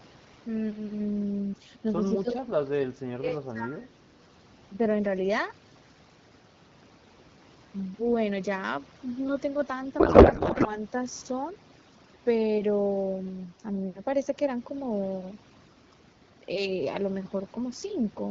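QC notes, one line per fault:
Throughout, overdone noise removal: the background drops between phrases, leaving sparse twinkling specks. The suppressor is cutting individual frequency bands deep or fully off whenever they sit close to its noise estimate, taking quiet speech detail with them. On a spectrogram the noise floor is darkened, scattered with isolated bright dots, and the harmonics look patchy and eroded at their weaker edges.
2.21 to 4.04 s, speech suppressed in double talk: the speech level sags and breaks up in pieces across this stretch, adding up to about one and a half seconds of attenuation, with the deepest dips around 25 dB. The likely cause is an echo canceller that saw both ends talking at once, couldn't tell this talker from loudspeaker echo, and turned everything down. The waveform shows sudden envelope dips and gaps.
9.99 to 10.79 s, codec payload misread: for about 0.8 s the speech gives way to garbled noise and warble that barely tracks the speech around it. 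The decoder is receiving frames that look valid but parsing their fields from the wrong bit positions. This fits octet-aligned AMR being read as bandwidth-efficient. The spectrogram loses its harmonic striping and turns into smeared, irregular energy, and the waveform shows a block whose envelope no longer follows the syllable rhythm.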